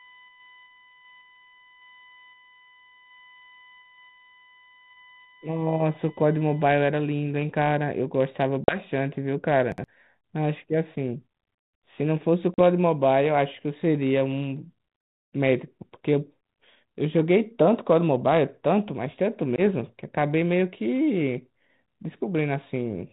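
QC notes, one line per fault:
0.00–6.70 s, USB whine: current drawn in 1 ms USB frames leaks into the audio path, giving a fixed 1 kHz whine, strongest at 2 kHz, about 25 dB below the speech.
8.64–8.78 s, 12.54–12.59 s and 19.56–19.61 s, packet loss on an ADPCM call: 40 ms, 40 ms and 20 ms lost, filled with silence; the decoder's predictor drifts, so speech resumes with brief distortion.
9.72–9.84 s, chunks out of order: a 60 ms chunk arrives one chunk late and plays after its successor, so the sound jumbles briefly at the hard joins.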